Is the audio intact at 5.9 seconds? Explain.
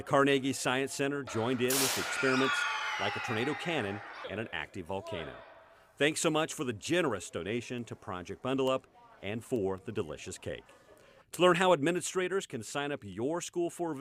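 No, 5.9 seconds falls inside a run of sharp ticks, roughly one per second, that runs from 0.67 to 13.13 s. These are word clock ticks. The receiving device runs on its own clock, about 20 ppm off the sender's. Each time the two clocks slip, a single sample is dropped or repeated, and the audio ticks.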